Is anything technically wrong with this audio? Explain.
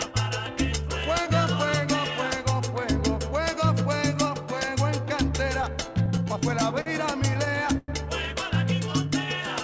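Yes. The audio comes through a call path that removes everything above 8 kHz, which fits a wideband codec such as G.722. On top of that there are two kinds of playback fault.

Repeated stalls (stutter): From 5.62 to 6.88 s the sound catches and drags through eleven brief holds, the longest 52 ms. From 7.34 to 7.90 s it does the same through five holds, one lasting about 100 ms. Packets arrived late, the jitter buffer ran dry, and the receiver stretched the last sound to fill about 150 ms in the first stretch and about 140 ms in the second. Nothing is actually lost.

Jitter buffer slow-down: Between 8.89 and 9.44 s the sound drags at an unchanged pitch, running at 92% speed with drawn-out sustains. The buffer was rebuilding its reserve, so the receiver repeated single pitch periods many times over, adding 55 ms.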